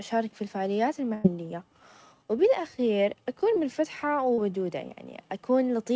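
At 1.14 to 1.26 s, right after "في الفعاليات", a burst of packet loss drops about 100 ms of speech. The receiver continues the last sound and fades it out, then resumes further on with audio missing. On a spectrogram the spectrum freezes and fades, then jumps abruptly.

Two short concealed packet losses follow, at 3.54 to 3.58 s after "وبالأخير أكون" and at 4.34 to 4.40 s after "وبالأخير أكون منفتحة". Each fills a 20 to 40 ms hole with continued sound, heard as a brief smear. The spectrogram shows a blurred smudge. Across the clip, the call path leaves nothing above 8 kHz.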